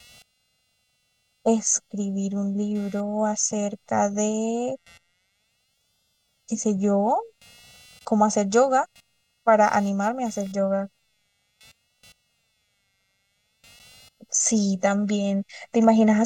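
A faint, buzzy chirping sits under the speech from start to finish, pulsing at roughly 200 times a second and about 40 dB below the speech. It is computer activity noise: processor, graphics or mouse load currents disturb the ground shared with the audio circuitry, so the interference tracks what the machine is doing rather than anything in the speech. That independence is why it stays audible in pauses and never follows the speaker's rhythm.

Across the whole clip the speech also sounds hollow and phasey, with a thin, slightly tubular colour that does not shift as the talker moves. This is channel delay causing comb filtering. One channel arrives roughly 1.5 ms behind the other, and when the two are folded to mono the shared content cancels at evenly spaced frequencies. The first notch falls around 300 Hz, taking body out of the lower voice range, and further notches repeat regularly up the spectrum.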